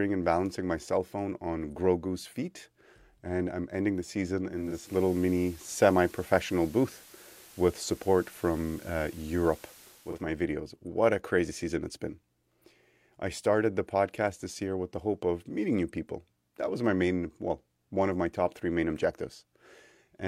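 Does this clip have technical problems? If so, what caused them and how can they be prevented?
Yes. From 4.48 to 10.30 s, just after "I'm ending the season", digital radio blending to analogue: a 482 ms cross-fade to the FM simulcast brings hiss about 25 dB down and a level shift of about 4 dB, rather than the silence a dropout leaves. A stronger digital signal, such as from a better antenna, prevents it.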